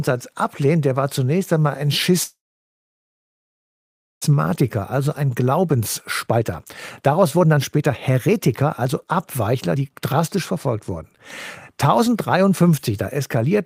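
From 2.23 to 4.24 s the speech stops: a brief buzzy continuation of the last sound fades into about 1.9 s of silence, then resumes where it left off. This call audio freeze was likely caused by delayed packets draining the jitter buffer, inserting a 2 s gap.

Right after, the speech sounds hurried at unchanged pitch, from 4.33 to 5.80 s at 108% speed, from 6.26 to 10.53 s at 118%, and from 11.99 to 12.93 s at 108%. This jitter buffer speed-up comes from trimming short pitch-period pieces to drain the backlog, removing roughly a second in total.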